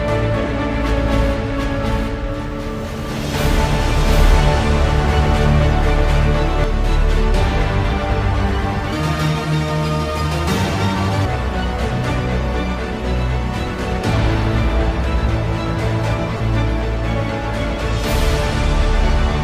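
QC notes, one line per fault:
0.00–6.64 s, doubled audio track: From the start of the clip, a second full-band copy runs about 0.7 s behind the first at roughly equal level. It has no decay or room colour and stops abruptly at 6.64 s, which points to a likely second capture path or a misaligned edit.
0.46 s and 16.37–16.40 s, lost LE Audio frames: Both are brief dropouts, 7.5 ms and then 30 ms long. The LC3 decoder refilled each gap with the previous spectrum using scrambled signs, so tonal content briefly turns to a noisy smear. The durations fit one and four lost frames.
8.93–11.25 s, section at the wrong speed: Playback runs 1.56 times too fast, so speed and pitch jump together, about seven semitones up, and the sound turns high and hurried. It snaps back to normal at 11.25 s, likely from this segment being timed against the wrong clock.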